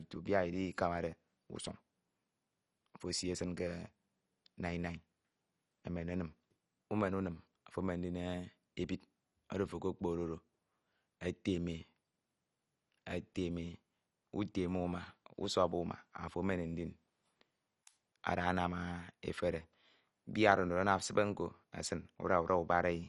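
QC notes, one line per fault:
throughout, MP2 compression: speech sounds dull and gurglingly granular, nothing above 11.3 kHz; likely low-rate sub-band coding, bands flickering off, unlike steady lowpass muffling.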